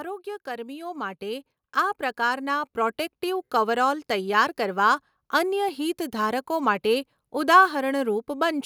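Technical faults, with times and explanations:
0.44–3.95 s, automatic gain rising: the gain control judged the input too quiet and raised its level steadily by about 11 dB over roughly three and a half seconds, so the speech and the background noise beneath it swell upward together.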